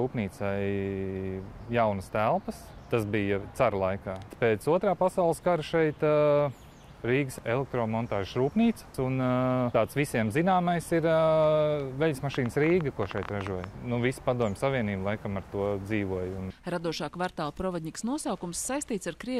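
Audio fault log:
12.35 to 13.65 s, train of clicks: for about 1.3 s a burst of sharp, near-identical pulses rides over the sound, roughly fifteen of them at an uneven pace averaging 11.6 per second, peaking around 10 dB above the programme. Because each pulse has the same shape and they cluster in a short run rather than being spread across the clip, the likely cause is interference from nearby equipment or a faulty connection or power supply injecting spikes into the signal path.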